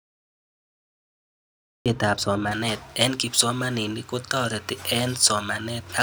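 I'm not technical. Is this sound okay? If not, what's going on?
No. There are two problems.

The first is a cut-off start. The recording began late, so nothing was captured for the opening stretch. The clip is dead silent until about 1.86 s, and then the speech jumps in mid-sound with no natural build-up, as if someone switched it on halfway through. Whatever came just before that moment is missing, and the sudden entry can sound like a small click.

The second is pre-emphasis left on. The high frequencies were deliberately boosted for recording or sending, and the step that should have turned them back down was skipped. From about 2.51 s to the end, the speech sounds thin, overly bright and hissy, with the s and sh sounds standing out sharply. The fuller, warmer part of the voice seems weak by comparison.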